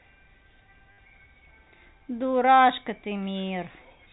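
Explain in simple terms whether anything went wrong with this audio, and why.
Something did go wrong, once. From 0.92 to 0.98 s the sound hits a gap of about 60 ms caused by packet loss with the last packet repeated. The sound travels in small packets. Some went missing, so the receiver kept replaying the last good one until fresh ones arrived. The replays repeat at the packet rate, so you hear a short robotic stutter with a buzz. The buzz suggests packets about 10 ms long. The audio also has a telephone-like quality from its G.711 coding, with nothing above 4 kHz.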